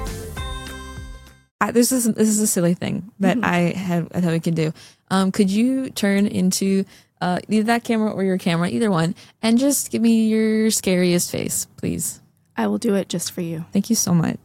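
Nothing here jumps out as a technical problem; the audio just rolls along without any hiccups worth pointing to.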